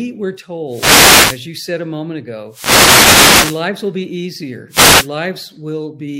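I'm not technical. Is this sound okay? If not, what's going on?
No. The speech has three wireless microphone noise hits: 0.68 to 1.46 s, just before "you said a moment"; 2.49 to 3.66 s, before "will be"; and 4.69 to 5.09 s, after "will be". Each is a burst of static where the radio link faded and receiver noise rose.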